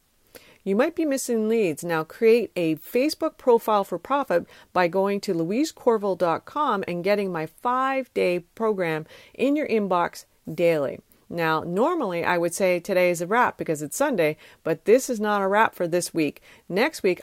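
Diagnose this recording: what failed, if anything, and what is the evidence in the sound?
A bit error spike at 11.89 s, just before "I would say today": one sharp tick, about -28 dBFS. A single flipped bit in storage or a digital link jumped one sample.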